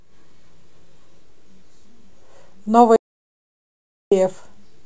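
An audio dropout to silence runs from 2.96 to 4.12 s in this speech recording: the sound cuts off mid-flow and about 1.15 s passes in silence, with no room tone, before resuming. The input was likely lost while recording continued writing silence.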